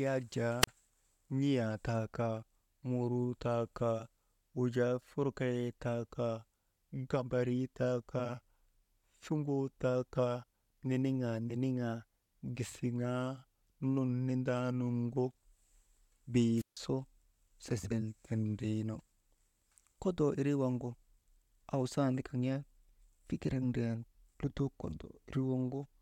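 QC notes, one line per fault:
0.61–0.67 s and 16.56–16.77 s: wireless microphone squelch dropout. The radio signal fades, hiss rises briefly, then the receiver's squelch mutes the output. The first hole, just after "yak jaa", lasts about 37 ms. The second lasts about 152 ms. Sound then returns.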